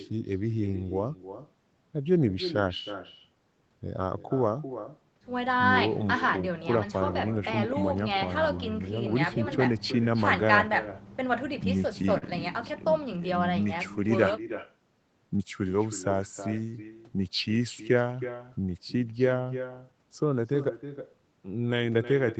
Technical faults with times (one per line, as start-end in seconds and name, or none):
0.00-22.40 echo with no canceller
12.18-12.24 short stall from a late packet